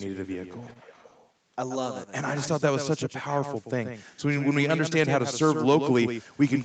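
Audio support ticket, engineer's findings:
Doubled audio track: second full-band copy of the whole clip, about 10 dB down, trailing roughly 150 ms behind, with no decay or room colour. Likely cause: a slower second capture path or an edit holding two copies out of step, summed into one track.

Echo leak: 0.15 to 1.29 s, a faint repeat of the talker's voice arriving 424 ms late, far below the direct speech. Likely cause: far end on loudspeaker, its echo canceller leaving residue that was sent back into the call.

Lost packet rebuilt from error correction: rougher, noisier patch at 0.69 to 0.71 s (20 ms) and 0.69 s is one packet; second at 2.43 to 2.49 s (40 ms, two packets). No gap: decoder played the low-bitrate in-band FEC copies carried by following packets. Content stops at 8 kHz, consistent with Opus wideband near 32 kbps.

Short concealed packet loss: brief smear at 0.73 to 0.77 s, 20 ms of audio missing. 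Jitter buffer missed it, decoder extended the preceding sound to cover the hole, then crossfaded back into received audio.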